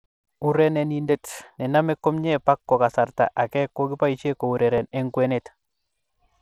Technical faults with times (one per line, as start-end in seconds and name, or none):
0.00-6.41 Bluetooth SBC compression
1.57-6.38 clock drift buffer slips